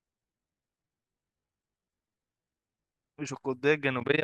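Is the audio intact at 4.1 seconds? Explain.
No. From 4.00 to 4.23 s the speech has overlap-add ripple: frames rejoin with an overlap whose gain isn't constant, so level dips about 60 dB some twenty times a second. It sounds like fast flutter; the waveform and spectrogram show regular notched gaps.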